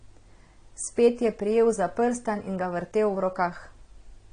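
Speech here, with plainly audible AAC compression throughout: nothing above 9.5 kHz and a dull, smeared sound, likely from a low bitrate around 32 kbps.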